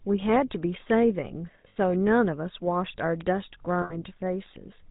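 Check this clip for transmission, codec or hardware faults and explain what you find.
Three kinds of fault are audible in this speech clip: GSM full-rate codec coloration throughout, two stretches of lost GSM frames, and two isolated bit error spikes.

GSM full-rate codec damage runs from start to finish and is plainly audible. The codec represents the voice as a vocal-tract filter driven by a thinned, regularly spaced pulse excitation, and nothing above 4 kHz survives. The result is a buzzy, gravelly roughness and a dull top end, which fits the 13 kbps full-rate mode. Ordinary band-limiting would only sound muffled. What marks this as GSM is the grainy buzz riding inside the voiced sounds.

Lost GSM frames occur at 1.68 to 1.77 s and at 3.82 to 4.04 s. Each gap is about 80 ms, which points to four consecutive 20 ms frames going missing. The decoder fills the gap by repeating the last good frame's parameters at a falling level, so the sound freezes into a rough, metallic ring instead of cutting off. 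A plain dropout would be silent or clicky at the edges. Here the brief held, ringing tone is the giveaway.

Bit error spikes land at 3.21 s and 4.46 s, each affecting a single sample. A flipped bit makes the sample value jump by a power of two and then return immediately, producing one sharp, broadband tick unrelated to the speech around it. The tick is instantaneous and carries no pitch or decay. That distinguishes it from the frame-loss artefacts, which are tonal, and from a codec glitch, which would smear over a whole frame.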